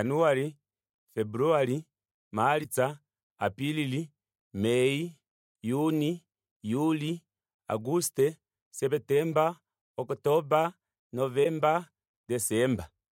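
At 2.60–2.66 s and 11.40–11.46 s, damaged data in the compressed stream makes the decoder lose frame sync, leaving a brief chirp, squawk, click or short hole.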